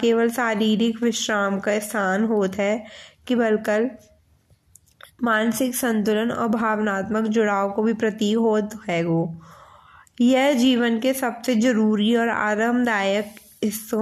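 No technical faults can be heard in the speech at any point, so there is nothing to describe in time order.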